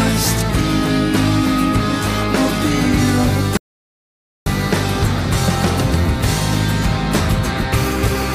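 At 3.57 s the audio drops out to silence and stays there until 4.46 s, a gap of about 0.89 s. This is an audio dropout to silence: the sound stops abruptly mid-flow and resumes just as abruptly, with silence in between and no trace of room tone or noise floor. The likely cause is a momentary loss of the input signal while recording continued, so whatever occurred during that stretch is simply absent.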